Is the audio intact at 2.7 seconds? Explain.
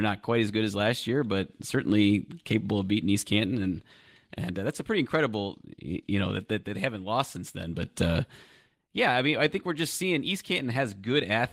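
Yes, the audio is intact at 2.7 seconds, with no fault at that moment.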